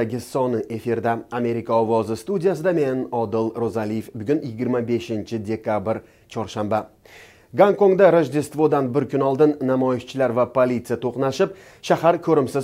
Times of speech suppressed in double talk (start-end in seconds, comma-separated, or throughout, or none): none